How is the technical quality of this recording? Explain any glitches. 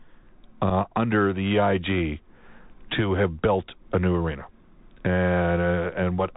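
Technical quality is pretty rough. It's narrowband headset audio with one brief dropout.

The Bluetooth CVSD headset codec runs the whole way through. Nothing gets above 4 kHz, so it's muffled, s sounds come out scratchy, and there's a grainy hiss underneath. That's one-bit up/down coding with an adapting step, which fits a 64 kbps CVSD link.

Around 0.70 to 0.72 s, just before "under the", there's unconcealed Bluetooth headset packet loss. About 7.5 ms of sound, a couple of packets, just vanished and nothing filled the gap, so you get a short hard-edged hole.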